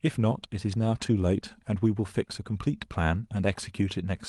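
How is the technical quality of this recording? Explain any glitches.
No glitches can be heard anywhere in this short speech recording. There is nothing in it that needs explaining.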